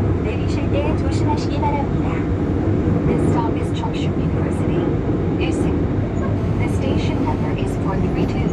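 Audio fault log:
6.37 to 7.53 s: GSM phone buzz. A nearby 2G phone in a call pulses about 217 times a second; rectified radio bursts give a steady, raspy buzz about 20 dB down.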